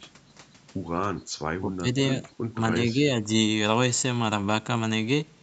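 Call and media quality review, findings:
Speech suppressed in double talk, likely echo canceller unable to separate near talker from far-end echo during overlap. Speech dips at 1.61–1.87 s (about 15 dB), 2.54–2.58 s and 2.94–3.03 s, weaker each time.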